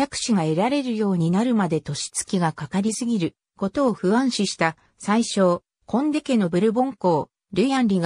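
Throughout, the audio was likely squeezed through MP3 compression at a low bitrate, which fits about 64 kbps, leaving plainly audible, watery, swirling damage.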